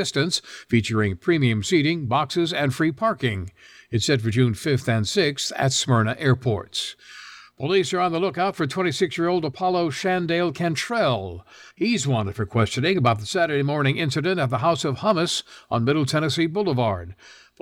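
No technical faults can be heard anywhere here.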